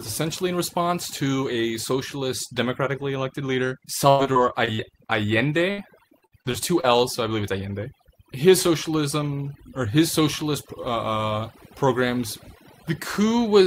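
Overdone noise removal runs throughout. The reducer cuts every band near its noise estimate, so the background sinks to twinkling near-silence.

Repeated packet loss (robotic sound) follows "socialist democratically elected leader" at 4.09–5.11 s, and precedes "so I believe it's" at 5.71–6.85 s. Gaps up to 94 ms are patched by extending earlier sound, so the speech comes out choppy with pieces missing.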